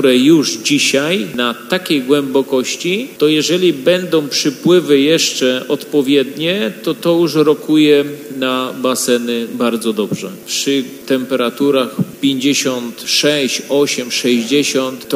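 No technical faults can be heard anywhere in the clip.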